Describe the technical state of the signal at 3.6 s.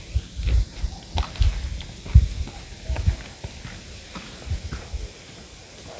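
At 3.6 s the audio is intact, with no audible technical fault at that moment.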